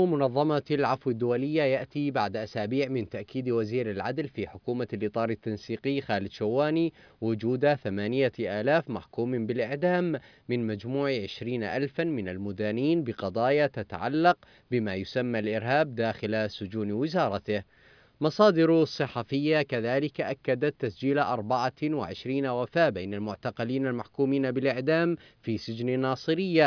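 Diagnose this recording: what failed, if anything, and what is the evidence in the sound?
No fault found anywhere.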